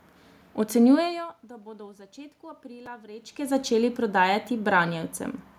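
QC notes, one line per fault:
2.86 s, chunks out of order: right after "da bodo v začetku" and before "vrečke začeli prodajati", a very short piece of audio, about 5.3 ms, is played one chunk late, after the chunk that should follow it. Nothing is dropped, but the swap creates three hard joins where the waveform jumps, so the moment is heard as a brief jumbled blip.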